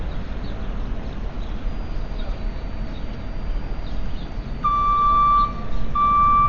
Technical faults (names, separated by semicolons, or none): Dolby Digital compression